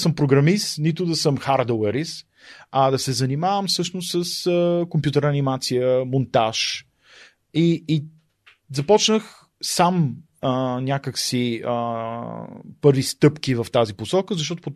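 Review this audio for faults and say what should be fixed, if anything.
Nothing in the speech stood out as needing a fix on listening.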